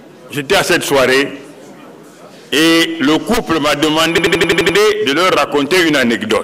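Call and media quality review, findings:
System hang loop, 4.18–4.78 s: one 85 ms chunk repeats 7 times, a machine-gun stutter at about 11.7 Hz. Host or driver stalled while the sound device kept replaying its ring buffer, which fits a 4096-sample buffer. Nothing seems dropped, just repeated.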